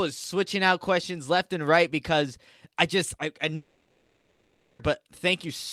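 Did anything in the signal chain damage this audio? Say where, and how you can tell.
Yes, there's a long network dropout from 3.55 to 4.81 s. The speech cuts off, and about 1.24 s gets papered over with a fading buzzy continuation of the last sound, then roughly 50 ms of silence. It picks up again with that stretch simply gone, likely packets that never arrived.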